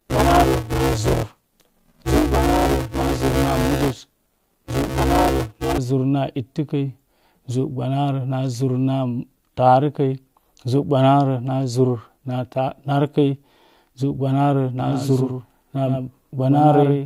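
From the start to 5.78 s the speech carries a steady robotic buzz at 200 Hz, present only while sound is playing. This is buffer tearing: writer and reader of a ring buffer have slipped, so most of each 5 ms period replays audio from about one lap earlier, with hard joins either side.

From 14.80 s to the end, a second full-band copy of the speech follows about a tenth of a second behind, a few decibels quieter, with no decay or room colour, and it cuts in abruptly. This doubled audio track is likely the same audio captured twice through a slower path.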